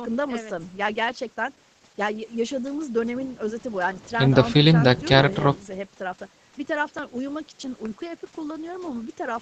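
Nothing's actually wrong with this bit of speech; it simply sounds like a normal call, with the top end stopping around 8 kHz the way a call codec at a modest setting leaves it.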